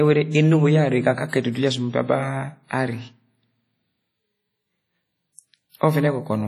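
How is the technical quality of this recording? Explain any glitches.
The technical quality is poor: heavy compression damage runs through the whole speech clip. The ringing, washy character and a hiss that swells and fades with the signal point to WMA compression, likely WMA 1 at a low bitrate, which fits about 32 kbps. Its long transform blocks smear quantisation noise over tens of milliseconds, and weak spectral lines get zeroed. A spectrogram would show patchy, holed high bands and pre-echo smudges around onsets, with nothing above 20.1 kHz.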